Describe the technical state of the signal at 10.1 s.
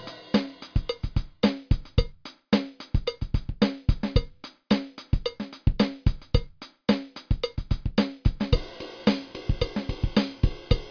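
At 10.1 s the audio is intact, with no dropout, distortion, glitch or other fault to be heard at that moment.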